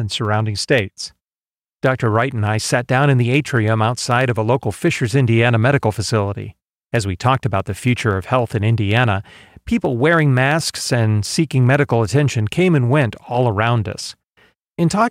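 A steady buzz at about 92 Hz runs under the speech from start to finish, as though something were rattling at a fixed rate beneath it, while pitch and pace stay where they belong. This is a block size mismatch (truncated): one stage hands over blocks slightly longer than the next stage takes in, so the tail of each block is dropped. Those regular cuts, about 92 per second, are the buzz, and the size difference is small enough that no speed-up can be heard.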